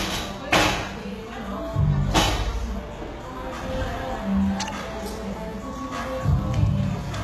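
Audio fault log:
Throughout: HE-AAC compression, likely the cause of the gritty, metallic treble; the top octaves are rebuilt from copied lower bands, which fits a bitrate near 16 kbps. On a spectrogram, upper bands repeat lower patterns under a coarse envelope, with nothing above 12.3 kHz.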